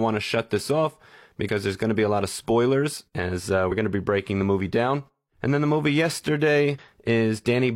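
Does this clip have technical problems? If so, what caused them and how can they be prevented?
Yes. Damaged data in a compressed stream causes brief glitches at 1.44–1.49 s (after "shut this off"), 3.67–3.72 s (after "of spoilers as uh") and 6.78 s, where the decoder loses sync. Prevention: use checksummed, error-protected transport and verify file integrity before decoding.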